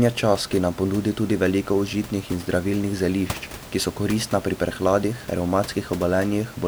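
Nothing stood out on listening to the speech, apart from the ordinary background noise of the room, which sits about 17 dB below the voice as part of the recording itself.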